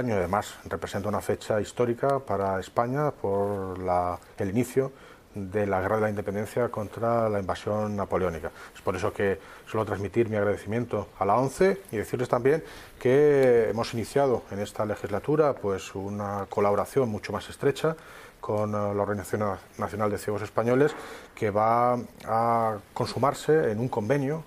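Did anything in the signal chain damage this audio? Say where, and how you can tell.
No, nothing in the signal chain has audibly damaged this audio. No stage, from capture through to playback, leaves a mark that can be heard at any point in the clip.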